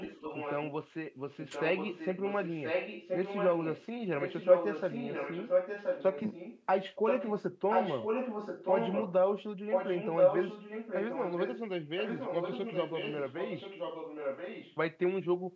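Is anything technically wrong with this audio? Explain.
Yes. There is an echo leak through most of the speech. A delayed copy of the talker returns about 1.03 s late during 0.00–0.72, 1.41–3.86, 4.19–6.67, 7.07–7.34, 7.70–9.13, 9.71–11.62 and 11.96–14.77 s. It is quieter than the speech at the start and end. In the middle stretches it is about as loud as the speech. The likely cause is a loudspeaker on one end whose echo canceller let its microphone pick-up slip back into the call.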